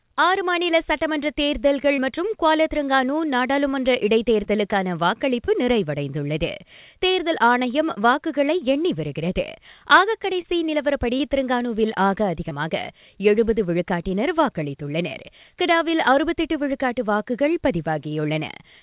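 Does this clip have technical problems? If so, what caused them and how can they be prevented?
Yes. Short concealed packet loss occurs six times, at 1.96, 4.44, 5.46, 10.42, 11.18 and 12.49 s. Each gap is about 20 ms, which fits single 20 ms packets arriving too late for the decoder. The receiver patched each hole by extending the preceding sound for roughly 11 to 22 ms before blending back, producing brief smears or wobbles in the speech. Holding network jitter down and giving the jitter buffer more depth would prevent it.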